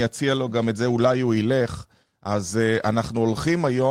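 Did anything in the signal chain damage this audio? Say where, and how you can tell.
No, nothing along the chain seems to have left a mark on this speech recording, so there's no damaged stage to point to.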